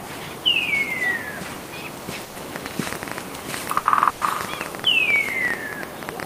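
A clip of everyday sounds with two problems. The first is a burst of packet loss, which happens three times: 2.23 to 2.38 s, 3.79 to 3.88 s and 4.09 to 4.24 s. Each time the receiver ran out of audio and stretched the last bit it had into a fading hiss or held buzz, 120 ms the first and third times and 60 ms the second. When playback picks up again, that same stretch of real sound is simply gone. The second problem is a train of clicks running from 2.56 s right to the end. It's about ten ticks a second at an uneven pace, and the ticks poke clearly above the sound, pauses included. The likely cause is interference from nearby equipment or a faulty connection or power supply injecting pulses.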